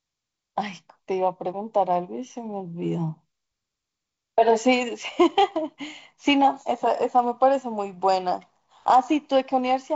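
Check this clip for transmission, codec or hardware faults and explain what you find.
Nothing in this speech recording points to a fault.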